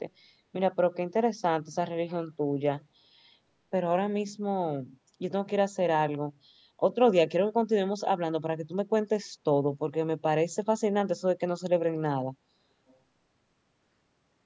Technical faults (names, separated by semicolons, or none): echo leak